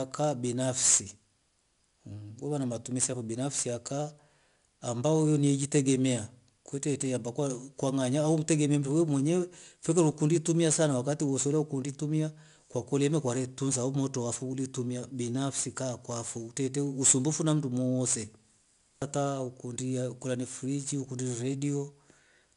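A speech recording carrying 4-bit ADPCM compression from start to finish, and the damage is plainly audible. Each sample is coded as a coarse 4-bit step from a prediction, so a gritty hiss rides on every loud syllable and sharp onsets distort. Unlike steady background noise, this grit rises and falls with the speech level. Unlike MP3-style artefacts, it doesn't swirl or warble. Nothing reaches above about 10.6 kHz, which fits a sample rate near 22 kHz and an 88 kbps stream.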